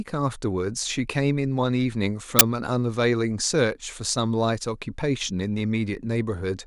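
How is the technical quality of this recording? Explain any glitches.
The recording has one glitch, a very short burst of static. File tags played as audio, at 2.39 s: embedded cover-picture data was read as samples, and because it is compressed it comes out as a hard-edged blast of very loud white noise.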